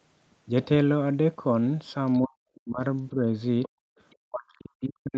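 At 2.07 to 2.11 s a brief scrap of the other side's voice leaking through appears, very faint, around 40 dB below the talker. It recurs at 2.55 to 2.59 s, stronger at about 30 dB down, at 3.63 to 3.69 s, noticeably stronger at about 20 dB down, and again very faintly at 4.10 to 4.15 s. Each is a short fragment. The likely cause is loudspeaker echo that the echo canceller left in the microphone signal. On a spectrogram these show as short, weak smudges of harmonic energy. On the waveform they are small ripples.

Speech suppressed in double talk begins at 2.25 s. For about half a second, until 2.81 s, the talker's level collapses deeply, down by roughly 40 dB at its lowest. A mild dip of only a few decibels follows at 3.12 to 3.25 s. At 3.77 to 3.84 s there is a short, deep cut. From 4.26 s the voice is pushed down again, as much as about 40 dB, until the clip ends. The likely cause is the echo canceller turning down both sides while they talked at once. 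On a waveform these appear as sudden pinches in the envelope. A spectrogram shows vertical dark gaps where the harmonics fade out.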